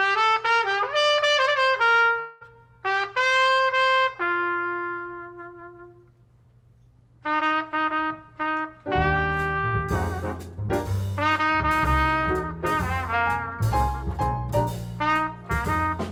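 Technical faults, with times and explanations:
2.19–2.43 s long network dropout: a buzzy, fading continuation fills the gap, likely from lost packets. The audio then resumes 0.22 s ahead, with smeared bands on the spectrogram.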